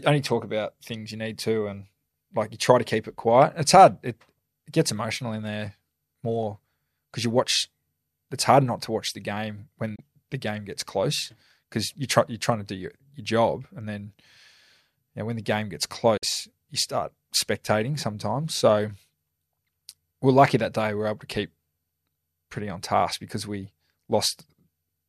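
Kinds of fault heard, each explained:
Digital broadcast dropout at 9.95 s and 16.17 s: after "to watch the game" and again after "when the game gets", the speech fades out over 8 ms and mutes while the receiver drops damaged frames, leaving 24 ms and 48 ms holes that fit one and two lost frames.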